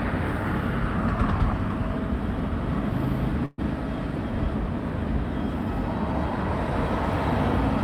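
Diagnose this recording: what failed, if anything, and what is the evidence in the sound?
Network burst of packet loss: from 3.45 to 3.60 s the receiver holds and fades the last sound for 124 ms, then resumes with 120 ms missing.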